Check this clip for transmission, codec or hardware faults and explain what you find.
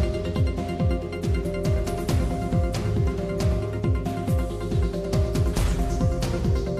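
There's one problem, and it shows up twice: damaged data in a compressed stream, as brief blips at about 1.44 s and 5.04 s. Bad bytes in the encoded data make the decoder misread those frames and hunt for the next valid header, so the sound breaks into a short glitch.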